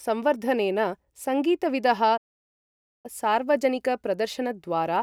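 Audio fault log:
2.17–3.06 s, playback stall: after "संवर्धनेन सङ्गीतविदः" the speech drops into silence for 0.87 s mid-flow, then resumes, likely because the player ran short of data.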